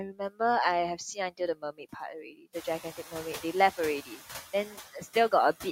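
Noise suppressor artifacts run throughout. The suppressor treats the steady background as noise and pulls it down by about 7 dB, frame by frame. The room noise rises by about 16 dB near 2.5 s and stays about 15 dB below the speech. Speech cut by the noise suppressor comes at 0.13 to 0.4 s, 0.96 to 1.4 s, 1.62 to 1.96 s, 2.23 to 2.55 s, 4.06 to 4.21 s and 4.68 to 5.16 s. Parts of the speech were mistaken for noise and turned down by up to about 18 dB. They sound faint or swallowed.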